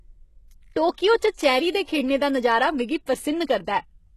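Throughout, likely HE-AAC compression at a bitrate near 16 kbps rebuilds the treble from copied lower bands, leaving the speech plainly gritty and empty above 12.3 kHz.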